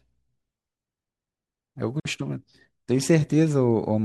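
Speech, with one gap at a join of encoded pieces at 2.0 s: the sound just drops out for about 51 ms and then resumes right where it left off. It's the encoder's start-up silence and last-frame padding left untrimmed where two separately encoded chunks were butted together, with the edges smeared by the codec.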